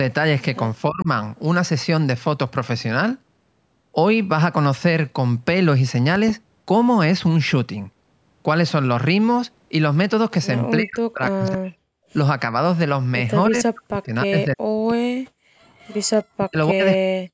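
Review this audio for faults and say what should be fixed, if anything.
Speech suppressed in double talk, at 0.89–1.08 s, 10.78–11.87 s, 13.48–13.56 s, 13.72–15.07 s, 16.34–16.82 s and 16.99 s to the end: the talker dips, by up to roughly 40 dB, most likely because the echo canceller couldn't separate near speech from loudspeaker echo and attenuated both. Better double-talk detection or a headset would prevent it.

Loud pop, a pair at 6.16–6.32 s: two sharp clicks stand a few dB above the speech, which continues underneath, likely from a voltage step such as a connector, switch or static discharge. Securing cables and grounding would prevent it.

Background gated by the echo canceller, 15.35–15.62 s: while the loudspeaker played, the canceller pulled the microphone down about 40 dB, so room sound drops out briefly before returning. Gentler suppression, or comfort noise to fill the gap, would prevent it.

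Echo leak, 15.78–16.23 s: a faint copy of the voice, around 25 dB below the speech and delayed 314 ms, comes back, likely because one side's echo canceller left residual loudspeaker pickup in its microphone signal. Lower speaker volume or a headset on that side would prevent it.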